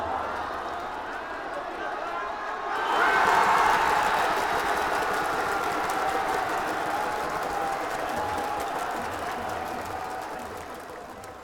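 No technical faults can be heard anywhere in this recording.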